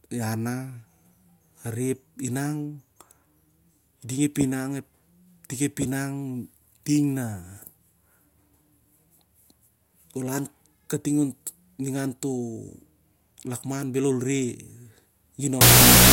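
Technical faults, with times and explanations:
15.61–16.13 s, wrong sample width: the last half-second of speech collapses into loud hiss with the voice buried underneath, dragged to half speed and lower pitch. The data point to 32-bit float samples being read as 16-bit integers, so each real sample splits into two mismatched values.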